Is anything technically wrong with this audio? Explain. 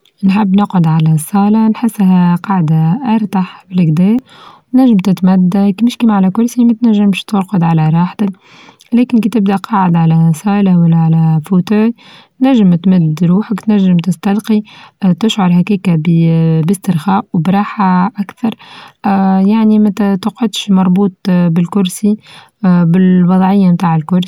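Yes. From 4.19 to 4.61 s there is processor overload crackle. The processor repeatedly misses its deadlines for buffers of roughly 5 ms, and each missed one is skipped. The cluster of hard-edged gaps sounds like gritty tearing, unlike a single dropout's one clean hole.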